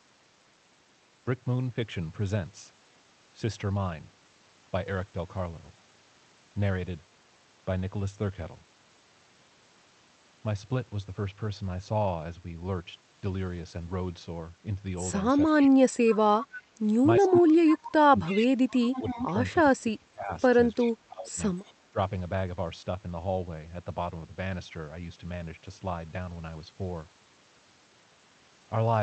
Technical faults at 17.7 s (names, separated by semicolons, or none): speech suppressed in double talk; echo leak